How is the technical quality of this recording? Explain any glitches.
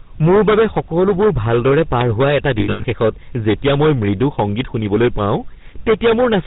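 The technical quality is poor: the speech is overdriven and heavily coded from start to finish, and there is a brief dropout in the middle.

Hard clipping runs through the whole clip. The level is pushed about 16 dB past what the chain can pass, so roughly a tenth of the samples are cut flat. Those squared peaks add high harmonics, giving a harsh fuzz on every loud syllable. The flattened tops distinguish it from soft limiting or codec grit.

The GSM full-rate codec is also present throughout, and its damage is plainly audible. The codec rebuilds the voice from a vocal-tract model driven by sparse, regular pulses, with nothing above 4 kHz. That produces a muffled, buzzy, gravelly rasp, which fits a 13 kbps full-rate coder. Unlike clipping fuzz, this roughness persists at low levels and lacks high-frequency content.

Lost GSM frames occur from 2.6 to 2.85 s. The damaged stretch spans about 240 ms, and in total roughly 200 ms is lost, with the longest gap around a tenth of a second. 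The decoder repeated its last good frame, so the sound freezes into a metallic ring instead of breaking into silence or clicks.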